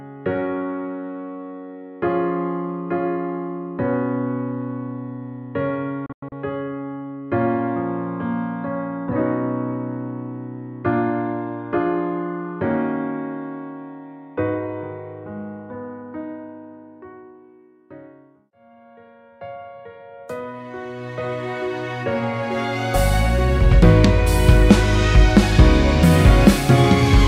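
At 6.06 s the sound breaks up in a digital broadcast dropout that lasts until about 6.32 s. The receiver stopped getting valid frames and muted its output until clean ones returned. The gaps are not one solid hole. About 160 ms of audio vanishes in short holes scattered over roughly 256 ms. The longest hole runs 96 ms. Each cut fades out in about 3 ms, so it sounds abrupt. The missing stretches fit a handful of lost frames and never come back.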